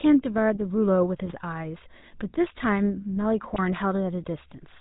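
GSM full-rate codec damage runs throughout: the speech has a buzzy, gravelly roughness and nothing above 4 kHz, as a pulse-excited vocal-tract model at around 13 kbps would give. GSM bit errors strike from 1.26 to 1.33 s and again from 3.48 to 3.59 s, where corrupted filter, pitch and gain values bend the spectrum and jolt the level, breaking the speech into squawks, pops and gargling. The second burst is longer and comes from a denser error rate on the link.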